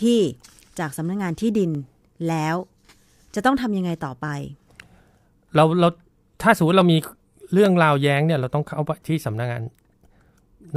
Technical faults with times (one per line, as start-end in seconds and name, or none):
0.91-10.19 clock drift buffer slips